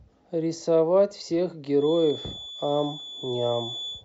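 From about 1.74 s right through to the end of the speech clip there's a feedback whistle: a thin, steady tone near 3.5 kHz sitting well under the talker, roughly 15 dB down, swelling and fading slowly in level as it goes. The likely cause is the loudspeaker-to-microphone loop hovering just at the edge of feedback, so that one frequency keeps ringing without ever climbing into a full howl.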